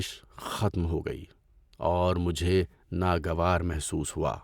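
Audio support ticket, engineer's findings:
No technical faults found in this speech recording: level, continuity and timing hold steady throughout, with no dropouts, clipping or glitches to trace to any component.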